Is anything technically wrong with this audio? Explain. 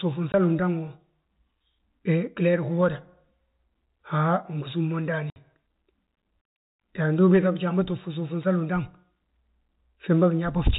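Yes, the audio has packet loss filled with silence. Speech packets were lost and the receiver inserted silence, cutting hard-edged holes at 0.32 to 0.34 s (20 ms, fitting one packet) and 5.30 to 5.36 s (60 ms, fitting three), through the G.711 telephone-band sound.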